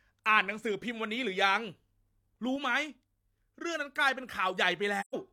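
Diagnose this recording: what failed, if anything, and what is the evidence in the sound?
At 2.56 s the speech drops in level by about 4 dB in a single step. The background noise drops with it, which rules out a change in the talker's delivery. The level stays down until 4.2 s and then steps straight back up. Neither edge has a fade. This is a sudden gain jump, likely from a digital gain stage in the processing chain. A new setting was applied from one sample to the next with no ramp.

From about 5.00 to 5.15 s the speech fades out and back in, leaving a soft-edged hole. This is AAC frame loss with muting at the codec stage. The decoder received nothing for those frames and filled them with silence. The overlapping transform windows then tapered the surrounding sound into and out of the gap. About 128 ms of audio is missing, which fits three lost frames.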